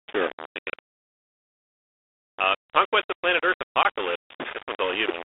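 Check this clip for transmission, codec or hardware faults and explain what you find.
Two faults are present: coarse quantisation across the whole speech clip, and a short dropout late in the clip.

Low bit depth without dither runs from start to finish. The grain sounds like the signal was rounded to about 4 bits with no dither, which is the likely cause. The quantisation error follows the waveform, so the noise sits only about 10 dB below the speech and is rough rather than steady. Quiet passages and decays break into grit, and the softest parts collapse or sputter between adjacent steps.

Packet loss on an ADPCM call occurs at 3.83 to 3.86 s, a 20 ms gap consistent with a couple of lost packets. The missing audio was replaced by silence, leaving a hole with abrupt edges. Because G.726 transmits differences from an adaptive prediction, the decoder's predictor and step size lost sync with the encoder during the gap. 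When speech resumes, it comes back slightly distorted and settles within a few tens of milliseconds. The underlying 32 kbit/s G.726 path carries the 300 Hz to 3.6 kHz telephone band with only light codec damage.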